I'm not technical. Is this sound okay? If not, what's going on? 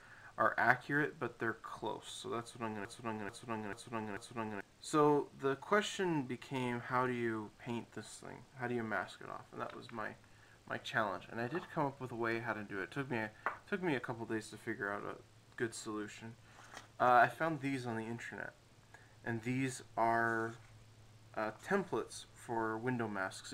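No. From about 2.85 to 4.61 seconds there's a broken-record loop: a short slice of sound, roughly 0.44 seconds long, plays four times back to back. Most likely the player or stream stalled and kept repeating its last piece, so whatever should have played there is gone.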